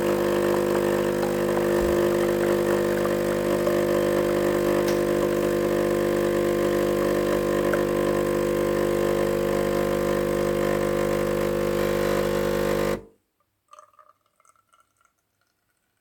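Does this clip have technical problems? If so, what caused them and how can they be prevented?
No, nothing in this audio stood out as a technical problem on listening, so there is nothing here to trace to a cause or prevent.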